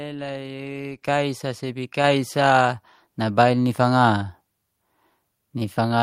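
At 1.02 s the call software judged the microphone too quiet and raised the device's input volume in a single step, a microphone volume stepped up event: just before "sa sebi" the speech and the room noise behind it jump together by about 8 dB. At 2.04 s, right after "sa sebi", the same correction happens again, adding about 4 dB, so the level climbs in two distinct stairs.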